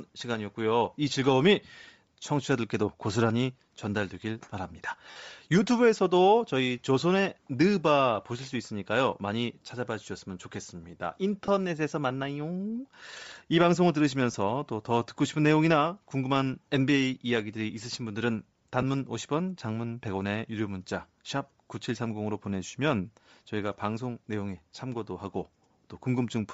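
Throughout the speech, the upper band sounds breathy and grainy, with plainly audible codec damage that likely comes from Bluetooth LC3 compression at a low rate of about 32 kbps. At 5.11 to 5.16 s, 11.46 to 11.48 s, 14.32 to 14.34 s and 18.82 to 18.84 s, brief noisy smears replace the sound. These are lost LE Audio frames, which the decoder covered by repeating the last spectrum with scrambled signs.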